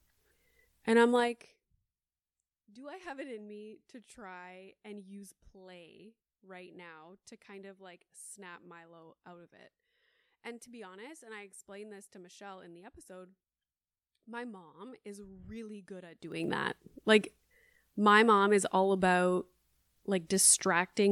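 From 1.12 to 1.68 s the speech drops about 20 dB under a fine zipping tick, and from 16.12 to 16.48 s it rises back with the same sound. This is zipper noise: the gain jumps in unsmoothed 2 dB steps, around thirty a second, each leaving a click.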